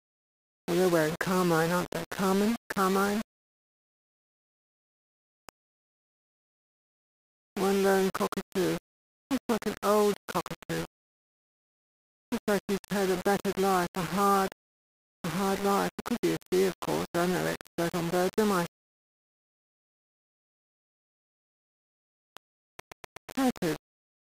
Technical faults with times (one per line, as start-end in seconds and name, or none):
0.00-24.31 low bit depth without dither
22.80-23.29 CD stuck on one turn